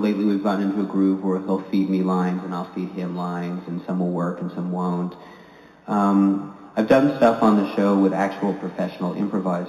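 Throughout, linear upsampling from 8 kHz to 44.1 kHz causes imaging: a faint mirror band at 4 to 8 kHz, about 35 dB down, adds light metallic shimmer.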